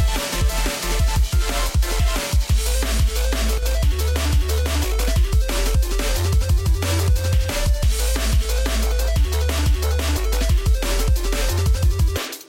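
From 3.58 to 3.63 s the sound dips abruptly by about 6 dB, likely one channel drops out; the waveform shows a sharp 50 ms notch in level.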